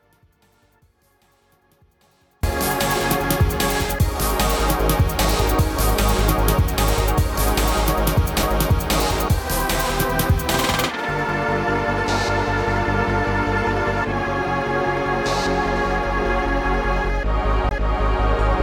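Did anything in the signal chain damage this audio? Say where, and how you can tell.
Yes. The first fault is an audio dropout to a faint residue, likely at the analogue wiring or input stage. The wanted signal is lost from the start until 2.43 s, leaving only a faint leak about 40 dB down, and then it snaps back in abruptly rather than fading up.

The second fault is a CD skip at the playback stage, where the disc's laser jumped to a different turn of the spiral. At 8.43 s a tiny mute of a few milliseconds is heard as a tick. At 17.69 s a longer mute of about 20 ms comes with a sudden jump in position.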